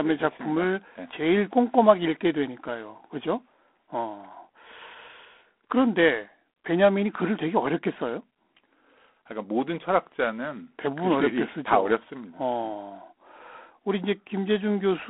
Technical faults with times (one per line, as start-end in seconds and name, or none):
0.00-15.10 G.726 ADPCM